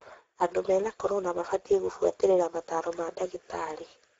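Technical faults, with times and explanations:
Throughout, Speex codec: the speech is plainly hoarse and noisy, which fits a low setting of around 10 kbps, where this CELP coder has too few bits for the excitation. Nothing remains above 7.7 kHz, and the top band is only shaped noise.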